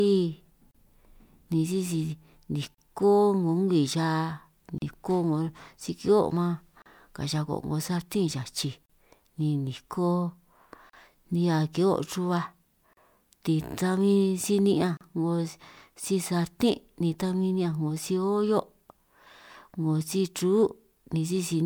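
Short dropouts open in the speech at 0.71, 2.75, 4.78, 6.82, 8.86, 10.90, 12.93 and 14.97 s, recurring about every 2 s. Each is a gap at a join of encoded pieces: separately encoded segments were butted together untrimmed, so encoder start delay and final-frame padding survive as silence. The first gap lasts 32 ms, the rest about 38 ms. Each gap has smeared edges, and the speech resumes where it stopped.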